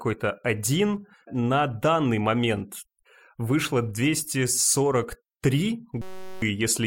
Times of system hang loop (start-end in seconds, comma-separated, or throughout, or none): 6.02-6.42